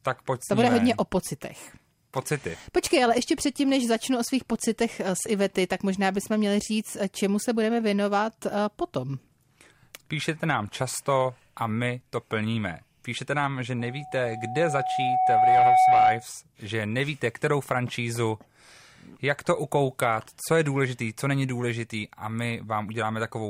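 From 13.79 s to 16.26 s, after "nám že", loudspeaker feedback squeal: the microphone re-amplifies its own loudspeaker output, and the loop gain exceeds unity at 746 Hz. That tone swells over about two seconds to roughly 10 dB above the speech, then stops before "že nevíte kterou francízu".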